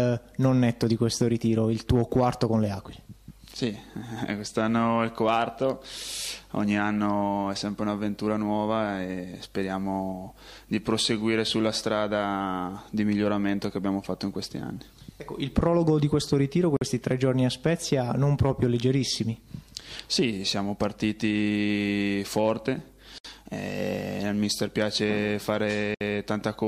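At 16.77, 23.18 and 25.95 s, gaps at joins of encoded pieces cut silences of about 48, 63 and 64 ms, left by encoder delay and last-frame padding. Unlike a dropout, the sound resumes exactly where it stopped, with nothing skipped.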